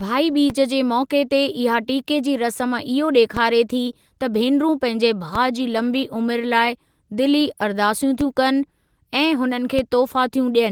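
Low thumps punctuate the speech at 0.50, 3.37, 5.35 (just after "भेनरूं पंहिंजे"), 8.21 (just after "लाइ दिली अरदासूं") and 9.79 s, each a brief dull knock under the talking. These are DC steps: the waveform's zero line suddenly jumps to a new offset, then drifts back over a fraction of a second as if through a 2 Hz high-pass. The abrupt jump carries the thump, while the speech itself continues undisturbed.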